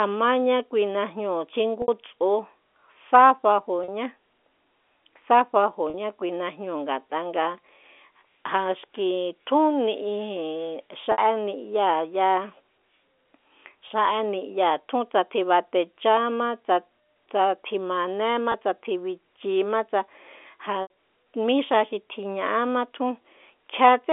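Speech over a G.711 telephone line, band-limited to 300 Hz to 3.5 kHz. Packet loss with pitch repetition occurs seven times: 1.82–1.88, 3.84–3.88, 5.90–5.94, 11.12–11.18, 13.88–13.90, 18.52–18.54 s (before "tsa tji bichima tsa"), and 20.82–20.90 s (before "mí xa xi tjiña'ama"). Gaps run 20 to 80 ms. The receiver loops the last pitch period, giving brief buzzy held tones on the shorter gaps, while the longer ones fade into silence before the speech returns.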